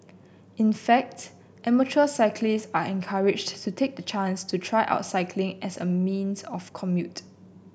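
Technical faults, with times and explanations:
No technical faults can be heard in this speech clip.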